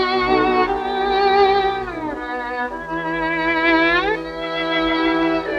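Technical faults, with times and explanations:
Nothing here stands out as a technical problem; it all sounds fine to my ears.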